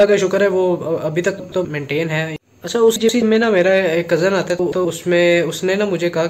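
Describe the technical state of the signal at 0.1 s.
The signal at 0.1 s is intact, with no audible fault at that moment.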